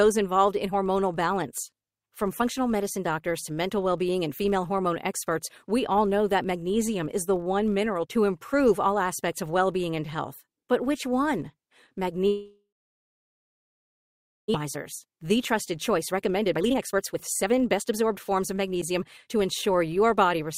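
Right through the speech there's a buzz at 50 Hz, rising and falling with the level. That's a filter restarted on every block: it loses its state at each block boundary and starts from zero, so every block opens with a tiny transient.

At 12.27 s the audio cuts out until 14.56 s. It's most likely a long network dropout. The last sound trails off briefly, then there's about 1.8 s of near-silence, and when it resumes about 1.6 s of the speech is simply gone.

From 14.64 s to 19.42 s the speech runs at roughly 113% speed while the pitch stays put, so it sounds rushed. That's a jitter buffer speed-up: a backlog built up, and the receiver shaves out tiny pitch-period slices, around 0.7 s in total, to catch up.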